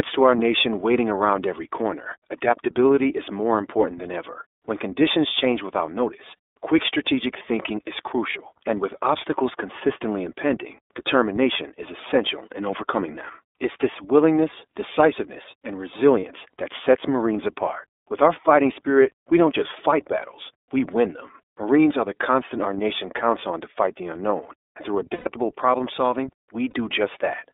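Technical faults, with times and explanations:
throughout: iLBC codec. The whole clip is squeezed through a narrowband line, with the speech sitting roughly between 300 Hz and 3.6 kHz. There's no air up top and a bit of thinness underneath. iLBC codes each 30 ms frame on its own, with no help from the previous one, which fits its 13.33 kbps mode. That costs some smoothness, so the voice comes across plainly rough and a touch synthetic, though it stays clear.
8.30, 16.19 to 16.24, 25.13 to 25.29, 26.70 to 26.74: lost iLBC frames. Most of these are a single 30 ms frame. The 8.30 one is on its own. The 16.19 one falls after "this willingness decisiveness and" and just before "that sets". The 26.70 one lands right after "problem solving". The long one, after "the unknown and through", covers about 120 ms before "problem solving". In each gap the decoder repeats the last pitch cycle with noise, so you hear a held, slightly buzzy vowel that fades on the long one. 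Since frames stand alone, the voice snaps back right away.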